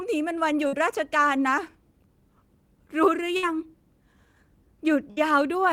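A speech clip with three bursts of packet loss, at 0.67, 3.37 and 5.11 s, each roughly 60 ms of audio gone. At each gap the receiver extends the last sound for about 50 to 60 ms and fades it, giving a brief held buzz or hiss before speech resumes slightly ahead. A spectrogram shows smeared, flattened harmonics decaying into each gap, and the waveform shows a shrinking, repetitive stretch followed by an abrupt restart.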